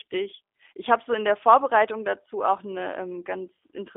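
Throughout, the speech has passed through the G.729 codec, which rebuilds each 10 ms frame from a vocal tract filter, a pitch predictor and a few pulses, which fits an 8 kbit/s link. Nothing above 3.7 kHz survives, and the voice sounds plainly rough and synthetic.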